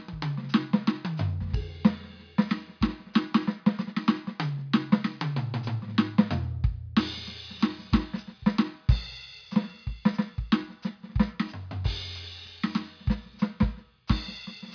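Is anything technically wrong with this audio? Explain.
No, nothing technically wrong turns up in this music clip on listening.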